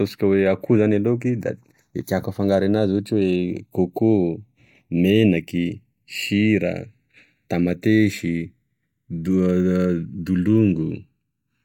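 Throughout the speech, the channels are drifting apart. Each side runs on its own clock, one off by roughly 50 ppm. The gap between them slides, reaching under a millisecond. Summed to mono, comb notches sweep slowly, heard as slow flanging.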